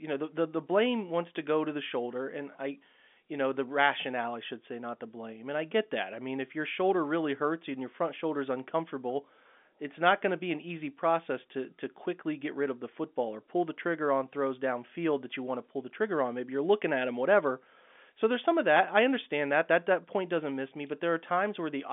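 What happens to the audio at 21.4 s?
Nothing goes wrong at 21.4 s: the speech there runs on intact, carried through the narrow telephone band of the G.711 line with nothing above about 3.7 kHz.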